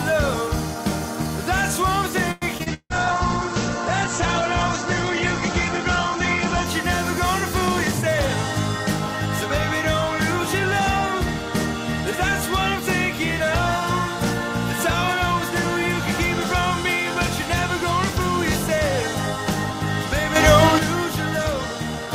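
Repeated packet loss hits from 2.31 to 2.93 s: four packets went missing or arrived late, the longest hole 160 ms, and each was patched by extending the preceding audio. About half that span is concealed, so the sound turns choppy and robotic, with pieces dropped out. A call bitrate drop follows from 2.70 to 6.76 s. The bandwidth estimate fell and the encoder was pushed from 64 kbps down to 10 kbps, holding that low rate for about 4 s, which narrowed the coded band from 20 kHz to 8 kHz. The audio becomes coarse and muffled until the rate recovers by 6.76 s. At 20.36 s a sudden gain jump raises the level by about 8 dB, lasting until 20.79 s, likely from a digital gain change applied from one sample to the next without a ramp.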